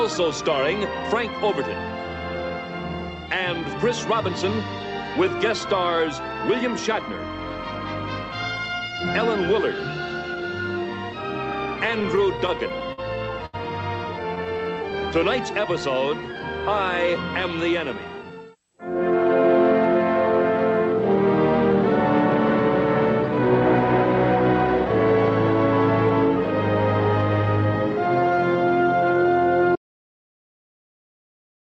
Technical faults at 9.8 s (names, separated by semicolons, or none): none